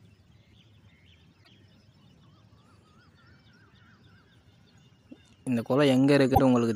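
Damaged data in a compressed stream gives short glitches at 1.40 to 1.48 s and 6.31 to 6.39 s. Corrupted frames confuse the decoder until it resynchronises.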